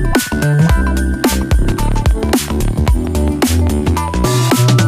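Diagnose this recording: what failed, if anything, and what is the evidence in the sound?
A train of clicks runs from 1.33 s to 4.69 s: about twenty near-identical pulses at a steady 5.07 per second, standing a few dB above the sound. The even spacing likely points to interference in the analogue wiring or a faulty connection or power supply injecting a repeating pulse.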